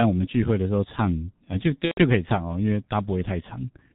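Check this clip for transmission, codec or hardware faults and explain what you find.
Two faults are present in the speech.

Throughout, it sounds muffled and hoarse with smeared consonants, from the G.723.1 codec: nothing above 4 kHz survives, and heavy low-rate coding fits about 6.3 kbit/s.

From 1.85 to 2.02 s, a fading smear replaces the voice. This is VoIP packet loss concealed by the speech codec, extrapolating roughly 120 ms, about four 30 ms frames.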